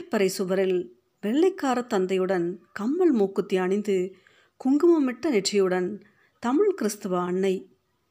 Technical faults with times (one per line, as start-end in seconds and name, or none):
none